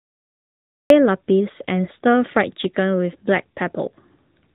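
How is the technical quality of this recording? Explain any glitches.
The technical quality is poor. Narrowband mobile coding runs through the whole recording, and the opening is truncated.

Throughout, the AMR narrowband mobile codec limits the speech to nothing above 3.8 kHz. Its vocal-tract model, fed by sparse pulses, makes the voice plainly buzzy and synthetic, which fits a rate around 10 kbps. That synthetic buzz, on top of dullness, separates it from a plain low-pass filter.

A cut-off start leaves digital silence from 0.00 until 0.90 s, where the speech bursts in mid-sound with no attack. Capture began late. Unlike a gentle fade-in or a quiet lead-in, the onset is instantaneous, from silence straight into the speech.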